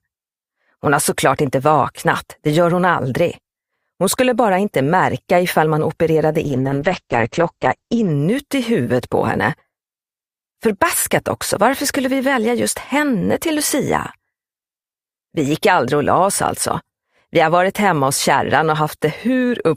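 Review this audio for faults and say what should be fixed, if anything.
A call bitrate drop from 6.45 to 8.17 s muffles the sound, with bandwidth narrowing from 20 kHz to 8 kHz; the coarse coding suggests roughly 9 kbps. Set a higher minimum bitrate and smooth the bandwidth estimate.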